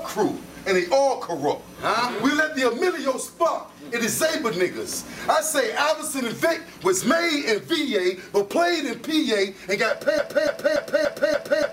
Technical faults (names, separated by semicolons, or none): broken-record loop